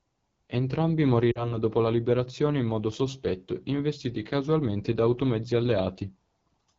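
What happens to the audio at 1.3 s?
From 1.31 to 1.58 s the speech briefly drops to near silence, then returns thin and rough just before "dopo la". These are lost AMR speech frames: about 40 ms of data, consistent with two 20 ms frames, failed their checksum, so the decoder repeated its last good settings at falling gain. Underneath, the AMR wideband (HD Voice) codec's low 8.85 kbit/s rate gives the voice a clearly raspy, rough texture.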